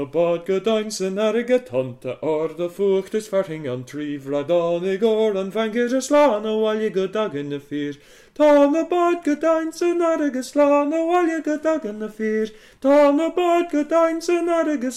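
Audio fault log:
6.13–13.10 s, hard clipping: Four short bursts of crackle land at 6.13–6.28 s, 8.41–8.65 s, 10.59–10.72 s and 12.90–13.10 s. Each is a loud passage pushed past the level the signal chain can carry. The overload is about 4 dB, 5 dB, 2 dB and 4 dB respectively. The peaks are sliced flat. Those squared tops add harmonics high in the spectrum. That makes the gritty, harsh edge on each burst.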